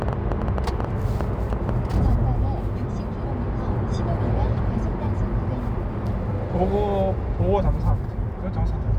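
An everyday-sound recording with a train of clicks from 0.02 to 1.70 s: around ten irregular pops at 6.58 per second, well above the sound, likely from electrical interference or a faltering interface.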